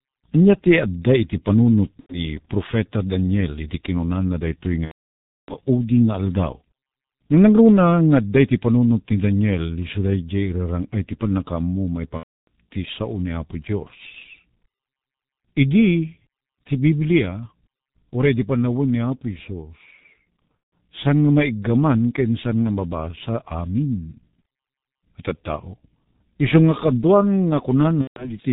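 G.723.1 codec throughout: the speech is muffled and hoarse, with nothing above 4 kHz and blurred consonants, consistent with heavy coding at about 6.3 kbit/s.

VoIP packet loss concealed by the speech codec occurs at 2.01–2.26 s after "ti adda iti panunot" (90 ms lost), 4.85–5.54 s after "iti kinunana na daytoy" (630 ms), 12.18–12.48 s (300 ms), 20.59–20.67 s (150 ms), and 28.01–28.33 s after "iso nga kaduan" (150 ms). Each time, the decoder extrapolates from its last pitch and filter with fading gain, and the voice stays weak briefly afterward.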